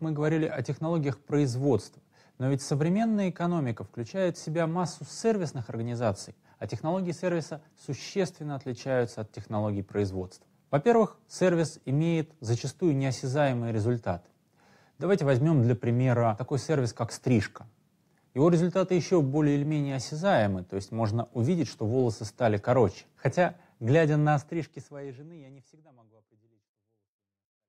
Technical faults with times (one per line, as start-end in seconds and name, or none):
none